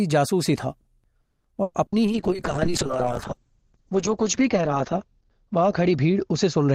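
A call audio freeze at 1.21 to 1.47 s interrupts this speech recording: the sound stalls for about 230 ms, the held tail decays, and the last 50 ms or so is silence. Speech then resumes exactly where it stopped, with nothing skipped. The likely cause is packets delayed in transit that let the jitter buffer run dry, so the receiver stretched the last sound to fill the wait. The extra 230 ms of delay remains afterward. Two bursts of packet loss follow, at 1.62 to 1.77 s and 1.86 to 1.97 s. In each, the receiver extends the preceding sound as a fading buzz or hiss, and the speech comes back further along. About 120 ms is lost in the first burst and about 60 ms in the second. Those stretches are gone for good because the packets carrying them never arrived in time to be played. A call bitrate drop starts at 2.08 s and continues to the end. The speech becomes coarse, watery and muffled, and the audible top end narrows from about 20 kHz to 8 kHz. 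The change fits the encoder being pushed from around 64 kbps to about 8 kbps after the call's bandwidth estimate collapsed. At that low rate Opus quantises heavily and drops the high band, and the degradation sits at its worst for roughly 2.6 s.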